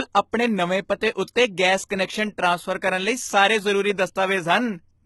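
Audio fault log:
Throughout, HE-AAC compression, the likely cause: gritty, metallic s sounds from treble rebuilt out of copied lower bands rather than simply dulled; nothing above 11.8 kHz, fitting a 16 kbps stream.
0.32 s, pre-echo: a 16 ms hiss smears in ahead of a sharp attack, coding noise spread back through its block, unlike a click landing on the onset.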